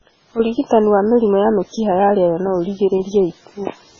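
Throughout this speech clip the sound is dull and watery, with a swirling, bubbly texture as weak frequency components flicker in and out, and nothing is audible above 7.2 kHz. This is likely heavy MP3 compression at a very low bitrate, which fits roughly 16 kbps. Starved of bits, the encoder has cut the treble at a fixed frequency and dropped quieter spectral detail frame by frame, leaving the remaining sound unstable and smeared.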